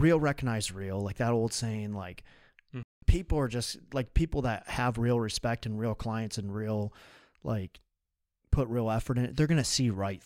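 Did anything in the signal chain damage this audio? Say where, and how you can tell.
Yes. At the reception and decoding stage there's a digital broadcast dropout. The speech snaps to silence at 2.83 s and comes back at 3.03 s, about 190 ms missing. The receiver muted after frames failed, which fits a handful of lost frames. That content is simply gone.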